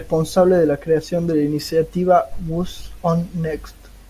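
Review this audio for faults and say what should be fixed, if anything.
No faults found in the speech; nothing to fix.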